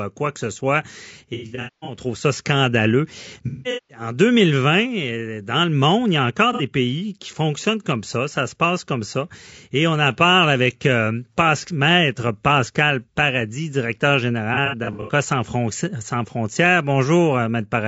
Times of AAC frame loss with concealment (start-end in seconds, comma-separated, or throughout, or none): 1.34-1.99, 3.47-4.00, 6.53-6.62, 14.54-15.12